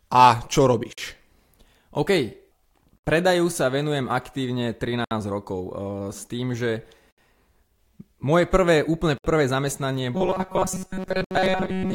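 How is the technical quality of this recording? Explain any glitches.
The recording has two kinds of fault: recurring dropouts at joins and a robotic stretch at the end.

Gaps at joins of encoded pieces occur at 0.93, 2.98, 5.04, 7.11, 9.18 and 11.24 s, about every 2 s. The first, after "a čo", lasts 49 ms. The others last 67 ms, including the one before "predaju sa venujem aktívne" and the one before "rokov e s tým". Separately encoded segments were joined without trimming encoder delay and padding, so the speech cuts out briefly and then resumes where it stopped.

Robotic sound from repeated short buffers runs from 10.15 s to the end. The speech becomes a rigid, metallic buzz at 188 Hz, which still loosely follows the speech. The likely cause is delayed audio being filled by looping roughly 5.3 ms of the last buffer, with most of the real signal skipped.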